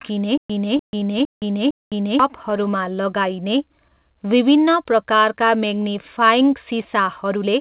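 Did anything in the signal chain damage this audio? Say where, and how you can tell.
Yes, at the playback and network-buffer end of the chain.

Stutter with silent gaps: from 0.38 to 2.19 s, a 277 ms chunk of speech replays four times, each followed by about 121 ms of dead digital silence, so it repeats every 398 ms. That's likely a stalled player re-serving its last fragment and then running dry, so the real audio for that stretch is gone.

Repeated stalls (stutter): two bursts, at 0.68 to 1.35 s and at 2.43 to 2.88 s. The first has eight little holes totalling 129 ms, the longest 48 ms, concealed across about 19% of the span. The second has seven holes totalling 66 ms, none over 11 ms, at about 15%. The jitter buffer kept emptying and the receiver padded each hole with the last sound. Nothing's lost, but the audio drags and jitters.

Short stall from a late packet: at 1.74 to 1.85 s, one sound hangs on for an extra 90 ms before things pick up exactly where they left off. 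A packet showed up late, the buffer ran out, and concealment stretched the previous sound to bridge it.

Jitter buffer slow-down: from 2.69 to 4.01 s, ending just before "विभिन्न प्रकारका", the speech runs at about 89% speed with the pitch unchanged, with 148 ms added in total. The receiver was repeating single pitch periods to rebuild its reserve, which is why the sounds feel drawn out.

Jitter buffer speed-up: from 5.94 to 7.46 s, right after "विभिन्न प्रकारका", the speech runs at about 104% at the same pitch, with around 70 ms trimmed out. The buffer had overfilled, so it clipped tiny pitch-period slices to claw back latency. The call codec path itself, which fits G.711 mu-law, shows up as nothing above 4 kHz.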